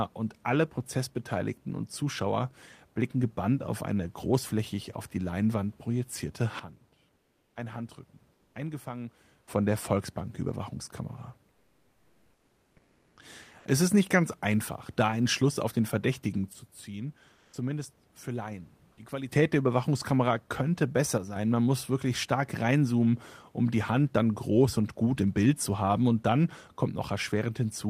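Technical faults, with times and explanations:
6.60–9.47 s, 16.53–19.32 s and 21.18–21.36 s: sudden gain jump. Speech and background drop together in one step, by about 12 dB in the first two spans and about 6 dB in the third, then return, the first just before "von der". The instant switch, rather than a fade, points to a gain change applied without a ramp, likely a level setting or bit shift.
7.15–7.55 s, 8.33–8.55 s, 11.51–13.17 s and 17.33–17.53 s: comfort noise in place of the background. During these pauses the textured room noise, about 40 dB below the speech, gives way to a steady, featureless hiss. The hiss is about 3 dB quieter in the first three gaps and about 2 dB louder in the last, and the real background returns before "es ist nicht ganz". These likely come from Opus DTX filling untransmitted silence with synthetic noise, which is why only the background changes and the speech level does not.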